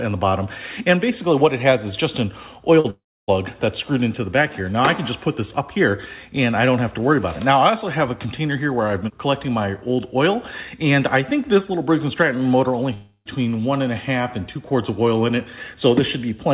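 At 2.80 s a short concealed packet loss starts. About 40 ms of audio never arrived, and the receiver bridged the gap by extending the preceding sound, then crossfading back by 2.86 s. It comes across as a brief smear or wobble. On a spectrogram, the harmonics or noise pattern just before the gap runs on unchanged, with slightly blurred edges.

Almost immediately after, from 2.90 to 3.30 s, comes a long network dropout, likely a burst of lost packets lasting about 380 ms. The concealment first stretches the last sound into a fading buzz or hiss, and then leaves roughly 290 ms of near silence before the real audio resumes, with the missing part simply gone. The same thing happens from 12.94 to 13.27 s: about 320 ms lost, a decaying fill, and only about 60 ms of silence. On a spectrogram, each dropout shows a smeared band fading to a dark gap. The waveform shows a shrinking envelope that drops to a flat line, and the signal returns abruptly. 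Throughout, the spectrogram shows nothing above 4 kHz, which fits a narrowband telephone codec on the call path.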